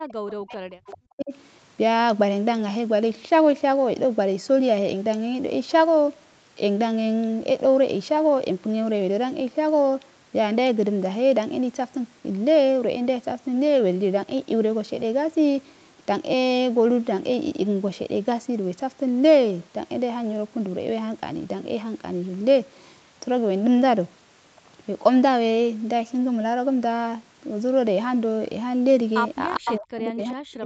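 Speech suppressed in double talk runs from 0.0 to 1.33 s. The voice sinks by roughly 40 dB, likely because an echo canceller facing two talkers at once could not tell this talker from loudspeaker echo and turned everything down. Inside that stretch, an echo leak at 0.88 to 0.92 s brings back a faint copy of the voice about 25 dB below it and 403 ms late. That copy is likely residue the far end's canceller failed to remove from its microphone and sent back down the line.

Near the end, a second echo leak from 29.54 to 29.77 s is much stronger, only about 5 dB under the speech, with the same 403 ms delay. That matching delay likely points to the same leaking loudspeaker path. Speech suppressed in double talk then starts at 29.58 s and lasts to the end of the audio, again pulling the voice down by roughly 40 dB, likely as the canceller ducks this talker along with the echo while they overlap. 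Throughout, the band stops at 8 kHz, which fits an Opus call link.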